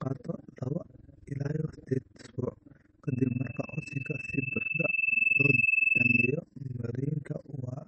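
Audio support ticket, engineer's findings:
Overlap-add ripple, whole clip: fast flutter, a rough tremolo around 20 Hz, level dipping by about 60 dB each cycle. Frame resynthesis stage, where the window overlap doesn't sum to constant gain, so every frame pumps.

Watery, swirly speech throughout, clearly audible, nothing above 8.4 kHz. Likely MP3 compression at a low bitrate, somewhere near 32 kbps. The encoder is starved of bits, chops the top end and lets weak bands flicker on and off between frames.

Loudspeaker feedback squeal, 3.07 to 6.39 s: a single 2.6 kHz tone that swells over roughly two seconds and ends up about 10 dB above the speech. Mic hearing its own speaker, with loop gain over unity at that frequency. Check monitor placement and the gain staging.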